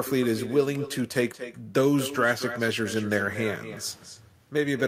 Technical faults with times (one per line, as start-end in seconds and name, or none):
0.00-4.88 echo with no canceller